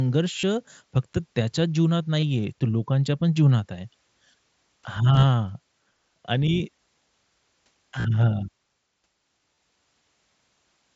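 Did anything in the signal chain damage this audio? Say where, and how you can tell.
Yes. The Bluetooth link between headset and phone dropped voice packets, and the receiver's concealment filled each gap, giving concealed Bluetooth headset packet loss at 0.39–0.43 s, 2.20–2.23 s, 5.13–5.23 s, 7.98–8.05 s and 9.55–9.57 s. The receiver repeated the best-matching recent stretch of waveform, so the longer runs, especially around 0.4 s and 8.0 s, become a brief buzzy sustained tone with a slight warble as real sound resumes. The mSBC wideband codec carrying the call leaves its light grain.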